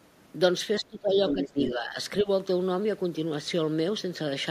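A speech recording where the echo canceller likely clamped down during double talk, causing speech suppressed in double talk: the voice dips, deepest around 20 dB, from 0.8 to 1.17 s, and by about 10 dB from 1.33 to 1.96 s and 2.23 to 2.28 s. Incomplete echo removal is the likely reason for the other side's voice leaking through from 1.28 to 1.68 s, only a few decibels quieter than the talker.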